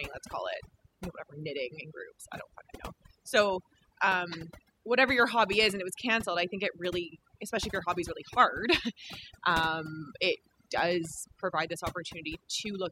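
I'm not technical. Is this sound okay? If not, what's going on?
No, there's overdone noise removal throughout. A cleanup tool was pushed too hard, leaving near-silent gaps with twinkly specks.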